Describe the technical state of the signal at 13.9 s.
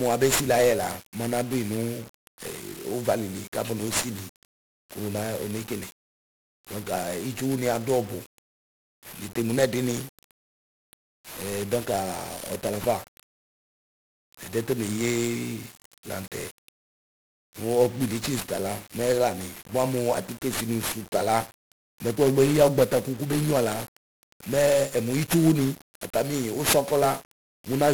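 At 13.9 s the speech is fuzzy and crackly, its treble smothered under broadband hiss, as it is across the whole clip. This is heavy 1-bit DFPWM compression: each sample becomes a single up-or-down bit steering an adaptive level, leaving coarse quantisation noise, which fits a rate near 48 kbps.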